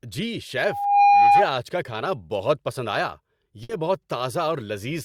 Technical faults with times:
0.58-1.54 loudspeaker feedback squeal
3.63-3.71 burst of packet loss

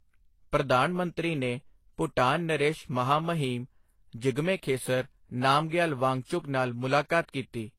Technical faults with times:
0.00-7.78 transcoding between lossy codecs

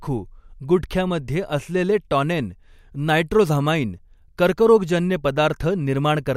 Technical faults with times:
none

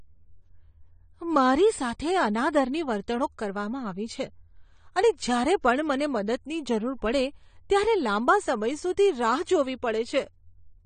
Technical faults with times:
0.00-10.86 AAC compression

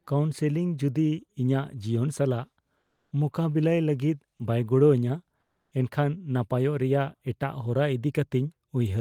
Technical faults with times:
2.79-3.11 comfort noise in place of the background
5.41-5.71 comfort noise in place of the background

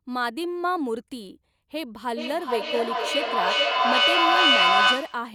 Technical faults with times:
2.14-5.34 feedback echo between two devices

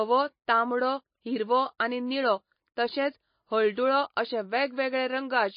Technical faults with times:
0.00-5.57 MP3 compression

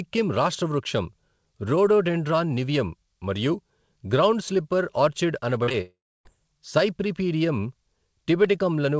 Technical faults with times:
5.64-5.75 short concealed packet loss
5.81-6.27 long network dropout

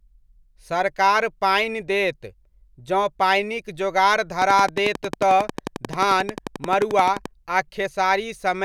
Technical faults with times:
4.42-7.26 train of clicks

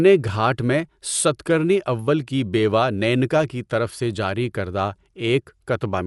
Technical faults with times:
0.00-6.06 Dolby Digital compression

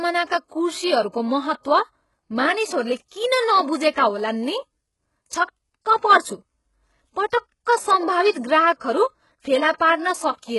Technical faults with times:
0.00-10.58 HE-AAC compression
3.08-3.11 pre-echo

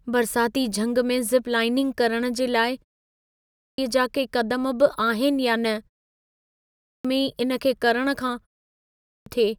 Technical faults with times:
3.20-3.78 clipped start after a pause
6.49-7.05 clipped start after a pause
8.74-9.26 clipped start after a pause

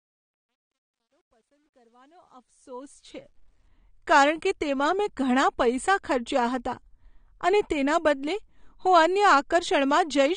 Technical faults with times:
0.00-10.36 AAC compression
0.00-3.68 truncation distortion on a fade

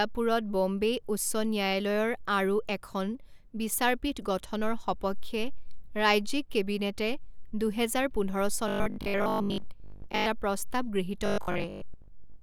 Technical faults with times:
8.68-10.26 robotic sound from repeated short buffers
11.26-12.42 robotic sound from repeated short buffers

